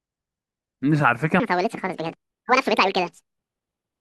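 From 1.4 s to the end, the speech jumps into a section at the wrong speed, 1.74 times too fast and about ten semitones higher, likely from a clock mismatch; spectrogram harmonics jump upward and widen.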